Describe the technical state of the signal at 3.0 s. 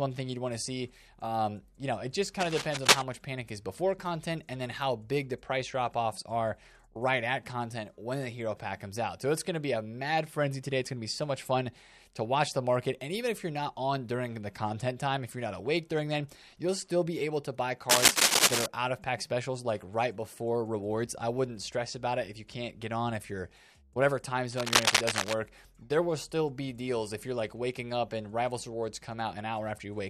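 At 3.0 s the signal is near the end of a burst of cable scratch noise running from 2.40 to 3.03 s, most likely from a worn cable, connector or control being disturbed so that its contact resistance jumps about from instant to instant. That erratic contact mixes dense, irregular noise into the audio, here sitting a little above the sound itself, so the passage is heard as scratching and rustling laid over it.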